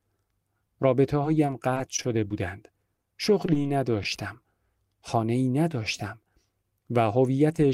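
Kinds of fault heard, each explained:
Repeated packet loss (robotic sound): lost packets patched by stretching the preceding sound, giving choppy, robotic speech with short holes from 1.23 to 2.32 s and 2.94 to 4.06 s.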